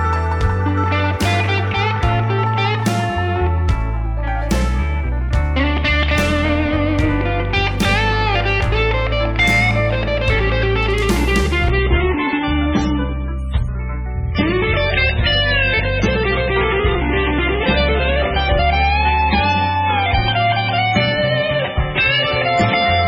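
At 11.70 s the adaptive stream switches to a lower bitrate and stays there to the end, a sudden drop with no gap. The treble collapses to nothing above 8.2 kHz and swirly codec artefacts rise. On a spectrogram the upper band is abruptly cut off.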